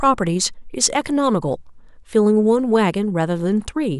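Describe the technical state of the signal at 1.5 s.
At 1.5 s the speech signal is intact, with no fault present at that moment.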